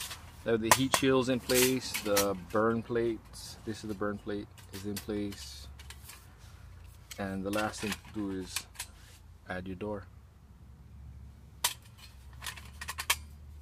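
A drift correction step from 7.75 to 9.50 s likely comes from clock-matching software slowing playback by 5.35% in one jump to manage its buffer. Speed and pitch drop together by 95 cents, nearly a semitone, detuning the audio until it returns at 9.50 s.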